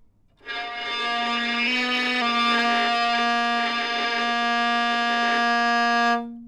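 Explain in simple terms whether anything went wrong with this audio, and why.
Something went wrong, likely a drift correction step: software keeping two clocks in line briefly sped playback up by about 5.6 percent. From 1.68 to 2.22 s, the sound runs faster and rises nearly a semitone in pitch, then snaps back.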